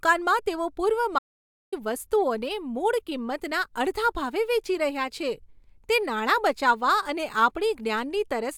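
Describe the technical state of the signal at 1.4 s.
Audio dropout to silence from 1.19 to 1.72 s, just after "તેઓ પૂર્વ": the input was likely lost while recording continued, leaving about 0.54 s of total silence without room tone.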